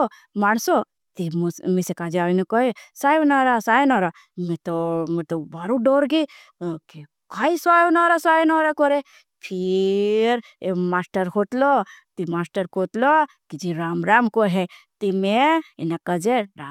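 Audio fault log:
No faults detected in the speech recording.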